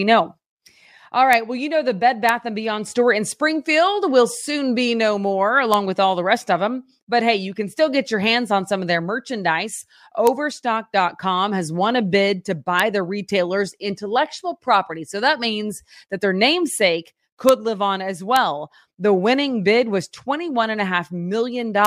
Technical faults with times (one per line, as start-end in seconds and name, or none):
1.33 integer overflow
2.29 integer overflow
5.74 integer overflow
10.27 integer overflow
12.79 integer overflow
17.49 integer overflow
18.36 integer overflow
21.85 integer overflow